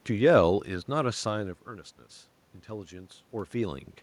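Speech recording with no technical faults heard.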